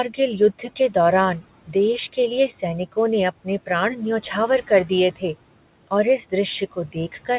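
Noise suppressor artifacts run through the whole clip. The suppressor estimates the steady room noise and pulls those bands down, by about 18 dB between phrases. The background drops away in the pauses and comes back under the speech. This is different from the room noise itself, which sits about 19 dB below the speech and would stay level rather than pumping with the talker. The sound is band-limited to about 4 kHz, as expected from a narrowband call path of the G.711 kind, and that dullness is not part of this fault.

From 6.61 to 7.29 s, near the end, comes speech cut by the noise suppressor. The suppressor mistook some of the quieter speech for noise and turned it down, by up to about 14 dB. In total only about a sixth of a second is affected, so some soft consonants and word tails sound swallowed or faint. Unlike a dropout or packet loss, the sound fades rather than stopping abruptly, and there is no click or gap.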